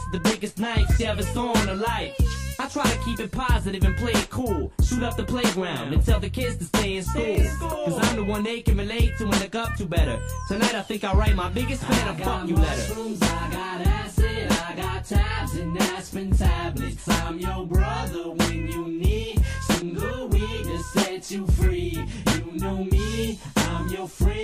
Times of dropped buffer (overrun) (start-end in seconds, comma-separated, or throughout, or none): 7.35, 13.50, 19.82